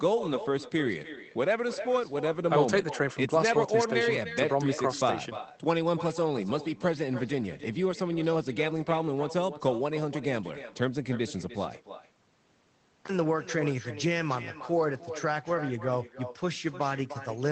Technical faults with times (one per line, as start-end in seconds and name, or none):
0.00-17.52 echo with no canceller